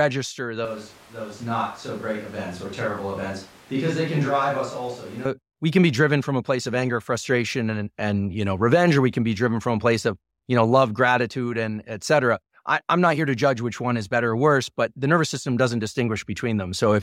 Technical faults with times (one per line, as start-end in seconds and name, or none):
0.65-5.25 switch to a distant microphone